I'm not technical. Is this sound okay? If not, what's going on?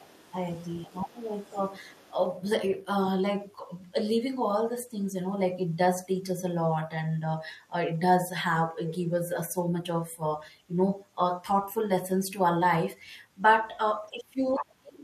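No. The other side's voice is leaking through faintly from the start to 2.26 s, and more clearly from 14.49 to 14.64 s. The caller's device likely played the other person on its loudspeaker, and the echo canceller failed to fully strip that sound from the microphone.

Speech is suppressed in double talk from 0.86 to 1.22 s, briefly around 1.52 to 1.56 s, and from 14.11 s to the end, where the talker's voice drops away sharply. Both people were likely speaking at once, and the canceller turned everything down.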